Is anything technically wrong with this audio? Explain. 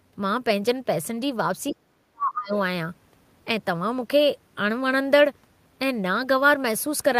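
Yes, there's one problem. From 1.71 to 2.54 s the speech gets pushed way down, most of that stretch affected and the deepest drop something like 40 dB, so it nearly vanishes before coming back. That's speech suppressed in double talk. The likely cause is both ends talking at once: the echo canceller couldn't tell this talker apart from the loudspeaker echo, so it clamped down on everything it heard, voice included.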